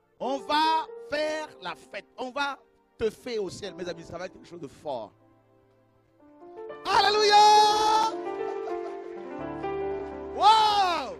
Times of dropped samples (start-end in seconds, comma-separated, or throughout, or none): none